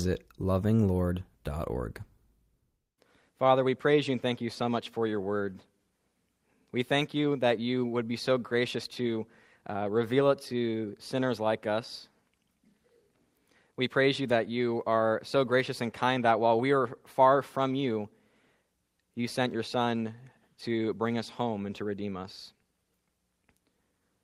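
No technical faults can be heard in this audio.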